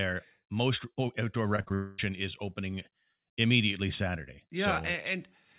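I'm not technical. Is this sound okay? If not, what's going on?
No. Everything goes wrong in one short stretch, from about 1.56 to 2.00 seconds, just before "is opening immediately".

Short concealed packet loss, at 1.56 to 1.60 s and again at 1.69 to 1.72 s: tiny pieces of the call arrived too late, and the phone papered over each with a brief guess, leaving a quick smear.

Burst of packet loss, at 1.62 to 1.69 s: several pieces went missing in a row. The phone stretched the last sound to fill the gap, so it turns into a short buzz or hiss.

Long network dropout, at 1.74 to 2.00 s: about a quarter of a second sounds like a held, fading buzz or hiss instead of real sound. This is likely the connection stalling, with the phone filling the hole until the audio resumed.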